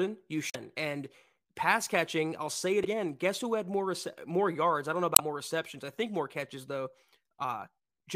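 Damaged data in the compressed stream of this speech clip makes the decoder misread or reject frames, lose sync, and hunt for the next valid frame header. Each time this happens a short, unnatural chirp, squawk, click or short hole breaks into the speech. It occurs three times: from 0.49 to 0.55 s, from 2.81 to 2.85 s, and from 5.13 to 5.20 s. Each burst lasts well under a tenth of a second before normal decoding resumes.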